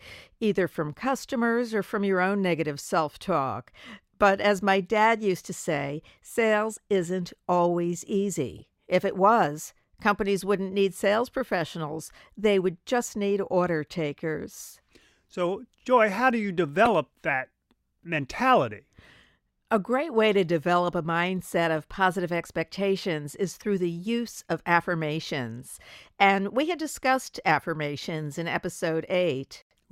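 Corrupt frame decoded, at 8.58–8.63 s, 16.83–16.88 s and 23.60–23.65 s: damaged frames were played as received, so misplaced energy produces brief chirps instead of the silence or smearing of a dropout. The middle burst is loud; the other two are faint.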